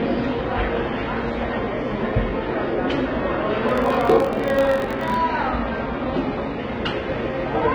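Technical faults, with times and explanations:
Throughout: HE-AAC compression, likely the cause of the heavy damage heard. The upper band sounds synthesized rather than recorded, with gritty, metallic treble. Only the lower spectrum is coded directly, and the top is rebuilt from copied lower bands, which fits a low bitrate around 16 kbps.
3.69 to 5.19 s: filter restarted on every block. A steady buzz at about 46.9 Hz sits under the sound and rises and falls with its level. The filter clears its state at each block boundary, so each block opens with a small transient, a rate that fits 1024-sample blocks.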